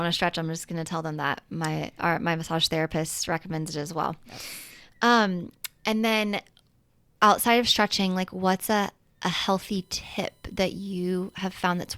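From 9.29 s to the end at 11.98 s, a faint fixed-pitch whine sits far below the speech, built on 1 kHz with its strongest component at 4 kHz. This is USB whine: current drawn in 1 ms bus frames leaking through power or ground.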